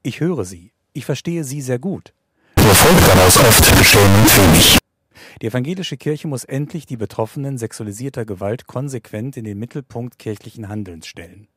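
From 2.57 to 4.78 s, after "verstehe sie sehr gut", float read as integer, likely 32-bit float samples taken as integers, turns the speech into loud, harsh, near-square noise.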